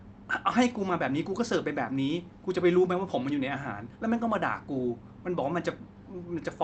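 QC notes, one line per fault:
No faults to note in these QC notes; the speech came through the Opus call path as expected.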